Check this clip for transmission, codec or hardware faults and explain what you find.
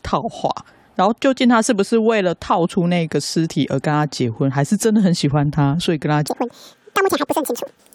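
One fault appears near the end. From 6.28 s to the end at 7.95 s, the speech suddenly rushes at twice its speed and jumps an octave higher. This is audio read two samples at a time (double speed): pairs of samples are consumed as single frames, as if the stream were stereo or wider-sampled.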